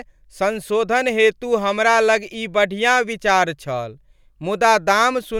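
Nothing stands out here; the speech runs along without any technical faults turning up.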